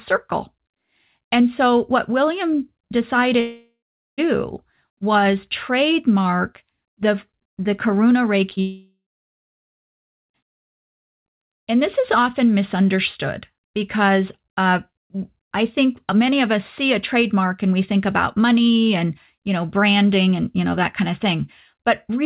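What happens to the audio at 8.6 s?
Two brief packet losses hit first, at 8.50 to 8.53 s and 8.55 to 8.59 s. Each time about 20 ms of speech failed to reach the decoder, and the receiver bridged the gap by extending the preceding sound before blending back. These short concealed packet losses are audible as a quick double smear or wobble.

Immediately afterward, from 8.61 to 10.36 s, comes what is likely a long network dropout, with roughly 1.7 s of audio missing. The last sound is stretched into a fading buzz or hiss, then about 1.3 s of silence follows. When the signal returns, the lost passage is simply absent. Throughout, the narrowband call path leaves nothing above 4 kHz.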